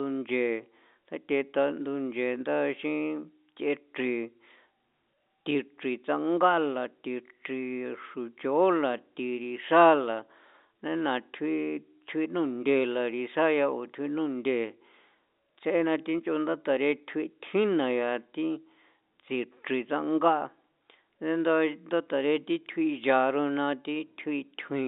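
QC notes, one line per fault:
The speech carries the narrow telephone band of G.711 coding, running from about 250 Hz up to about 3.7 kHz, consistent with a standard 64 kbps A-law line, with any quantisation noise at most faint beneath the signal.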